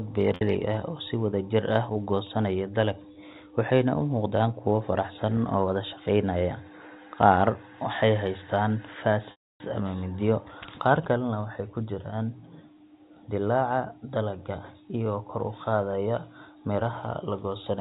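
Telephone-band speech, limited to 4 kHz by its G.711 coding, with two dropouts from packet loss with pitch repetition. At 0.35 to 0.41 s, about 60 ms is lost and bridged by looping the last pitch period, heard as a brief held, buzzy tone. At 9.31 to 9.60 s, a 290 ms gap outlasts the concealment: the repeated period fades to silence within about 50 ms, and the speech returns through a short cross-fade.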